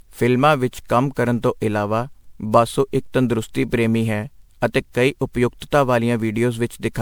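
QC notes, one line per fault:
Throughout: generation loss. The speech sounds swirly, hollow and smeared, with blurred attacks, yet content reaches 20.9 kHz, so it is not one low-bitrate encode. It likely went through around ten MP3 passes near 128 kbit/s, each requantising on a shifted frame grid.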